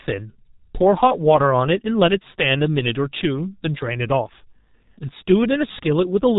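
From start to finish the speech carries the sound of the G.723.1 codec, and the damage is heavy. Everything above 4 kHz is gone, so consonants smear and the voice turns muffled and hoarse. The slow, frame-by-frame updating of the voice model, with a sound that fits a rate of around 6 kbit/s, blurs transitions. On a spectrogram the energy stops sharply at 4 kHz, and formants look blocky and stepped in time instead of smoothly gliding.

Between 1.08 and 1.17 s there is VoIP packet loss concealed by the speech codec. The gap fits a single lost 30 ms frame. The decoder filled it by repeating its last pitch and filter settings at falling gain, which produces a brief buzzy tone or coloured noise that fades. Because the next frames build on that guess, the voice stays weak or distorted for tens of milliseconds after about 1.17 s. On a waveform the envelope dips and then recovers. A spectrogram shows a static, unchanging patch there in place of changing speech.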